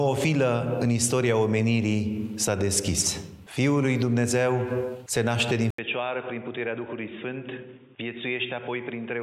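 At 5.70 s there's a brief gap of about 80 ms, and from there to the end the sound changes character. Everything above 3.7 kHz is gone, so it turns dull and boxy, it drops noticeably in level, and a faint new noise floor sits well under it. That combination points to an input switched to a poorer device, likely the capture jumping to a different microphone or a headset's call profile partway through.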